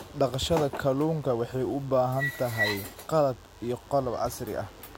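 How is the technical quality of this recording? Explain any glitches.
The recording carries one fault for its full length: DECT cordless phone buzz sitting under the speech from start to finish. A nearby DECT handset or base station transmits a brief radio burst 100 times per second, and something in the audio chain rectifies that burst into the signal. The result is a thin, steady 100 Hz buzz rich in harmonics, about 35 dB below the speech.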